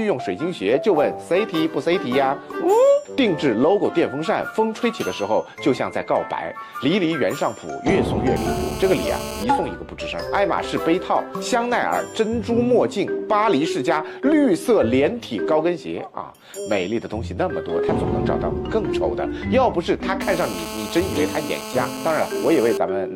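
A hard, raspy buzz at 217 Hz, thick with harmonics and about 11 dB below the sound, runs steadily from 8.36 to 9.44 s and again from 20.21 to 22.78 s. This is GSM phone buzz: a nearby 2G handset on a call, its burst pulses rectified by the audio circuitry.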